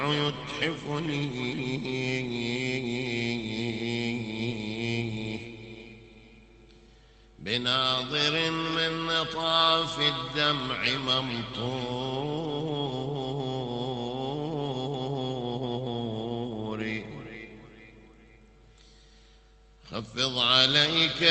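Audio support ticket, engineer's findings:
Nothing stood out on listening through the call path audio.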